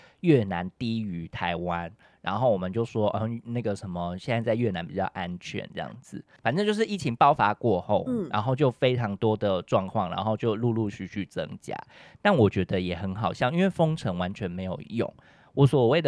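No technical faults are audible.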